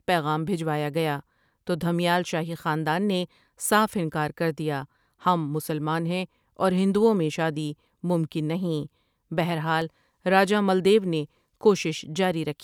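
At 9.82 s the speech skips very briefly: a few milliseconds of audio are missing, with the two sides butted together and no silence between them. This is likely audio missing between chunks, lost as a 5.0 s chunk closes and the next opens. On a waveform it shows as a sudden discontinuity; a spectrogram shows a thin vertical line.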